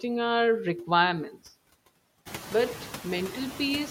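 Throughout the clip, the background noise drops away in the pauses and swells back up underneath the speech. These are noise suppressor artifacts. The suppressor pulls down every band it judges to be steady noise, by about 16 dB. It decides frame by frame, so the floor pumps with the talker. The room noise rises by about 13 dB at roughly two and a half seconds.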